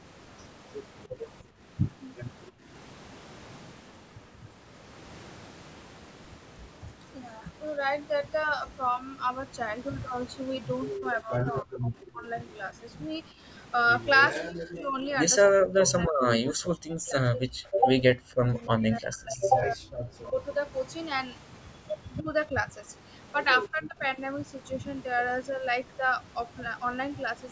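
From 1.09 to 1.53 s the voice dips by around 15 dB in brief patches. This is speech suppressed in double talk, likely from an echo canceller that could not tell the near talker from the far-end echo while both spoke and so attenuated everything. On a waveform the envelope pinches inward, and on a spectrogram the harmonics fade, with the upper bands thinning first beneath the 8 kHz ceiling of the call's band limit. At 2.47 s a faint echo leak appears: a copy of the voice returning about 295 ms late and roughly 30 dB down, likely audio from a loudspeaker that the canceller did not fully remove. It shows as a ghostly, delayed repeat of the preceding harmonic pattern. Suppression follows at once from 2.5 to 2.71 s, with gaps deep enough to sound like dropouts, around 25 dB. From 10.98 to 13.42 s the level sags intermittently by around 20 dB, and a second echo leak runs from 12.02 to 12.56 s, again 295 ms behind and very quiet, adding a dim delayed duplicate of the voice. 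The heaviest suppression spans 14.4 to 20.35 s. For about four seconds of that stretch the voice is cut in chunks by as much as around 40 dB, leaving the waveform as ragged islands with near-silent gaps and spectrogram columns that drop almost to the floor. Short dips of around 15 dB and 20 dB return at 22.19 to 22.29 s and 23.68 to 24.19 s.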